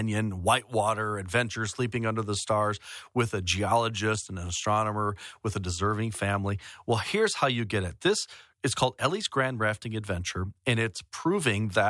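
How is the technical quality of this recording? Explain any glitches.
No glitches are audible here.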